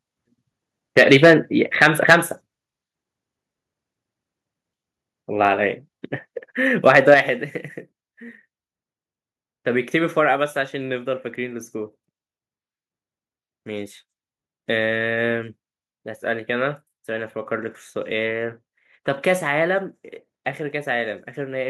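Microphone overload appears at 0.97 to 1.34 s, 1.81 to 2.15 s and 6.86 to 7.14 s. The input level was likely set too high, so peaks ran about 6, 9 and 3 dB past the converter's limit. Their tops were flattened on a small share of samples, giving loud syllables a harsh, crackling edge.

A microphone volume step-down comes near the end of the second overload and right after the third, at 2.13 s and 7.14 s. The software likely reacted to the clipping by cutting the input gain in one jump, about 2 dB and then about 6 dB. Speech and background fall abruptly in level at each step.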